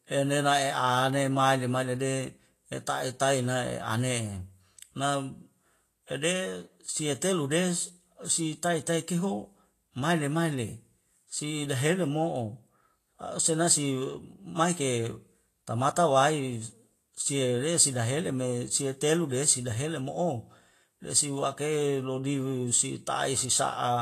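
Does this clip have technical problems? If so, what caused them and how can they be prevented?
Yes. Throughout the speech there is plainly audible damage from Vorbis compression, likely the cause, with nothing above 14.2 kHz, and the treble replaced by a hissy, grainy wash that roughens tones and blurs consonant attacks, which fits a bitrate around 33 kbps. A simple low-pass filter would dull the sound cleanly, whereas here the remaining highs turn to noise-like grit of similar energy. To prevent it, encode at a higher Vorbis quality setting.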